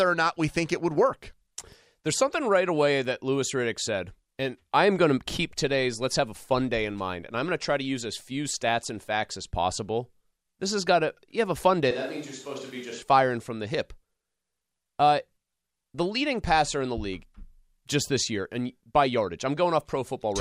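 At 11.91 s the speech suddenly goes roomy and hollow, and it stays that way until 13.02 s, about a second. It sounds like a switch to a distant microphone: the close mic's signal most likely dropped out and something further off, maybe a camera mic, carried the audio instead. The bass thins, the level falls by around 5 dB, and the room noise comes up to maybe 20 dB below the speech. The switch back is just as abrupt.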